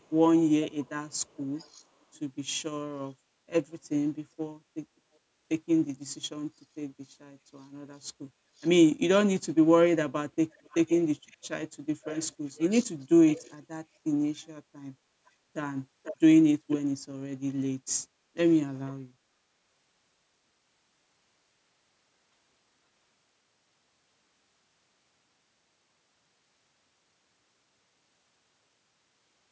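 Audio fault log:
0.02–1.84 s, 8.57–8.68 s, 10.52–11.48 s, 12.02–13.56 s, 15.26–15.30 s, 16.03–16.17 s, 16.70–16.77 s: echo leak. A delayed copy of the speech trails it by 442 to 495 ms, about 40 to 10 dB below the direct sound, likely loudspeaker pickup the far end's echo canceller failed to remove.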